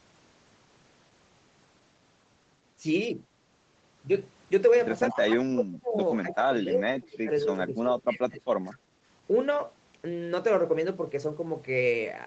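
From 5.11 to 5.98 s and again from 6.21 to 8.61 s, the speech keeps sinking by as much as 25 dB or so, in pieces adding up to roughly 0.7 s and then about 2 s. That's speech suppressed in double talk, likely because the echo canceller couldn't separate this talker from the far side and pulled both down.

Right after, at 8.71 to 8.77 s, there's a brief echo leak: a faint scrap of the voice returning 216 ms late, roughly 25 dB under the speech. It's most likely residue the loudspeaker side's canceller failed to remove from its microphone pickup.

Then at 8.89 to 8.95 s the room sound dips by about 6 dB for around 70 ms before coming back. That's background gated by the echo canceller: it clamped the microphone while the loudspeaker was playing, then let go. Throughout, the audio's top end stops around 8 kHz, as the call path sets it.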